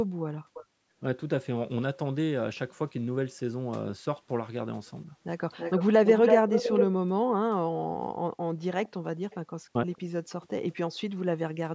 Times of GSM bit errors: none

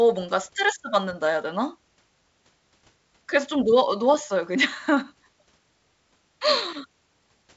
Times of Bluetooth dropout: none

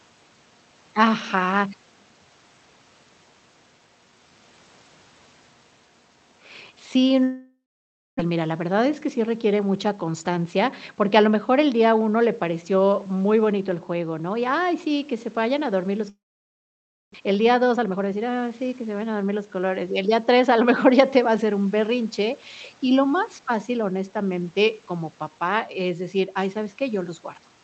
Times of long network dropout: 7.23-8.21, 16.09-17.16

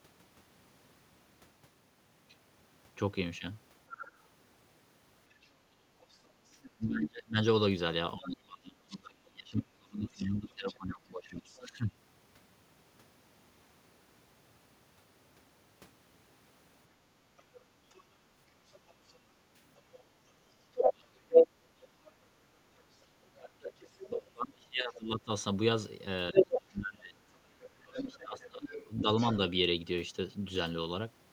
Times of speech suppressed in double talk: 6.77-11.96, 20.73-21.36, 23.33-29.07

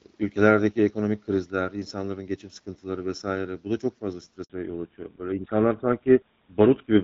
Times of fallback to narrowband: 4.50-7.03

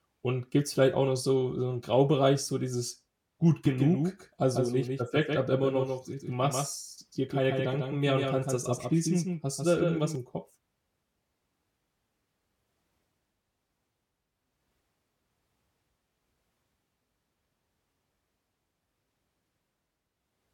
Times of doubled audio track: 3.65-10.15

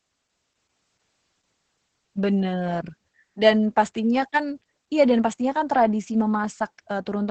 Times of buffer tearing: none

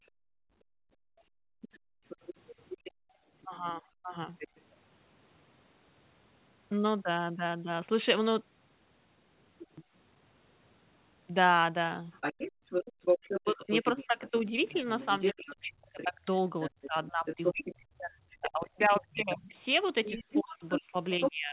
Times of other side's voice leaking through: 1.61-3.47, 4.39-4.76, 9.59-9.84, 12.12-21.52

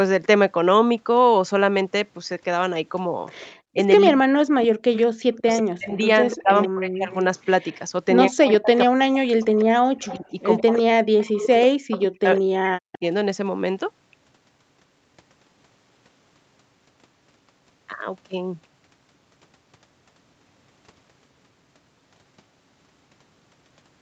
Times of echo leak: 4.62-5.41, 6.30-7.78, 8.53-8.58, 9.59-12.00

